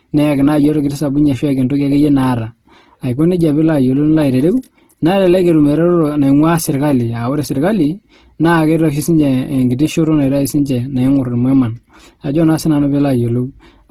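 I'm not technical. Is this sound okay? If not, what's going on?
No. Opus compression runs through the whole clip. The speech sounds rough and grainy, with a noisy, sandpapery edge. That's likely because the file was squeezed very hard, and the encoder filled in the detail it couldn't keep with noise-like sound.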